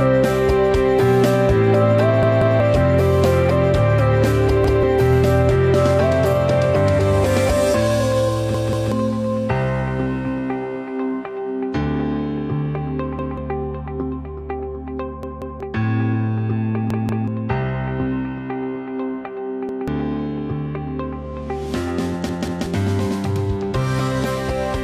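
Repeated buffers occur at 2.23–2.60, 4.64–4.83, 8.55–8.92, 13.19–13.38, 15.23–15.60, 16.90–17.28, 19.69–19.88 and 22.29–22.66 s. Each time, audio arrived late, so a 186 ms block, which fits an 8192-sample buffer, replays once or twice, losing roughly 0.2–0.4 s. It sounds like a hard-edged stutter and shows as identical waveform and spectrogram slices butted together.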